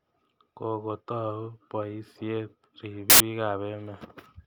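Speech with a burst of very loud white noise from 3.10 to 3.20 s, file tags played as audio: embedded cover-picture data decoded as samples, showing as a hard-edged broadband block on the spectrogram and a dense slab on the waveform.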